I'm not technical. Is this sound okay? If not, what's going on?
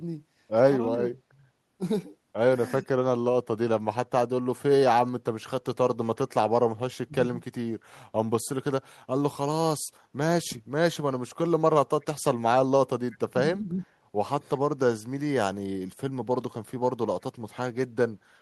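No. The voice briefly dips or drops out at 0.96, 2.79, 6.9, 13.27 and 13.59 seconds. That's speech suppressed in double talk, likely when both sides spoke at once. At 12.01 seconds a very faint repeat arrives about a third of a second late. That's echo leak, likely from loudspeaker sound not fully removed.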